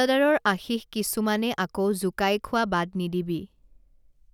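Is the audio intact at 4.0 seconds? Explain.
Yes, the speech at 4.0 seconds plays through cleanly, with no dropout, click, distortion or other fault at that point.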